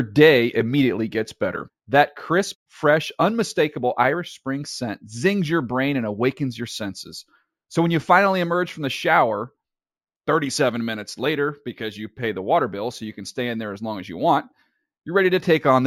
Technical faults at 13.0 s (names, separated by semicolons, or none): imaging from linear upsampling